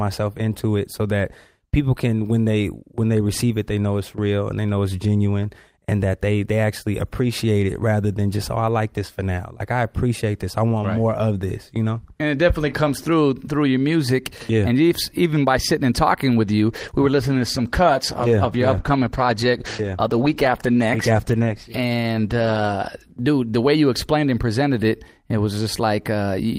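From 16.68 s to 23.69 s, a call bitrate drop makes the sound coarse and muffled, fitting a fall from 32 kbps to 13 kbps after a bandwidth-estimate drop.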